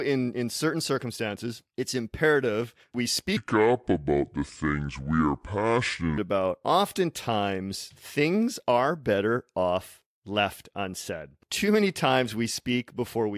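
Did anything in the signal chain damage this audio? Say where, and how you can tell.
Yes, a wrong sample rate at the playback stage damaged it. From 3.37 s to 6.18 s, after "circumstances it's imperative we" and before "about oftentimes things are", the speech runs at two-thirds speed and drops about 7 semitones, which fits 48 kHz material clocked out at 32 kHz with no conversion. Unlike a pitch shift or time stretch, tempo and pitch fall together by the same ratio, formants included.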